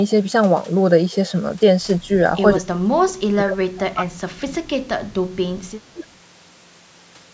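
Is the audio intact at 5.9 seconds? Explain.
No. From 5.93 to 6.06 s the speech dips sharply, roughly 15 dB at its deepest. This is speech suppressed in double talk, likely from an echo canceller that mistook the overlapping talker for loudspeaker echo and turned it down.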